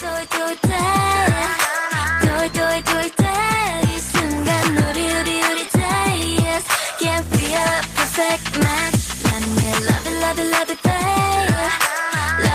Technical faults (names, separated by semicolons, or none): none